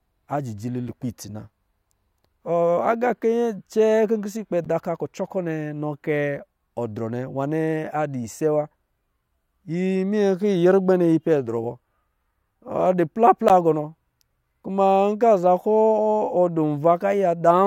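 Three times, blocks of samples were replaced by zeros, producing a block of digital silence each time. The first is at 0.89 s, just before "lukpɛ itsi na", a 5 ms gap that fits a 256-sample buffer. The second is at 4.65 s, after "pisɛ ikpɛ", lasting 11 ms and fitting 512 samples. The third is at 13.49 s and lasts 14 ms. Each hard cut to silence and back is heard as a brief tick or dip.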